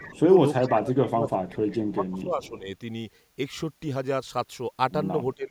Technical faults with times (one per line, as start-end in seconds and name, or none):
0.00-0.20 echo leak
0.01-0.27 speech suppressed in double talk
0.57-1.62 speech suppressed in double talk
1.67-2.49 echo leak
1.93-2.67 speech suppressed in double talk
5.35-5.50 speech suppressed in double talk